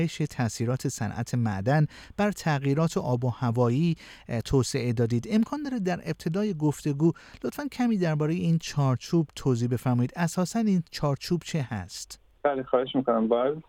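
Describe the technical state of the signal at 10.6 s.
The signal at 10.6 s is intact, with no audible fault at that moment.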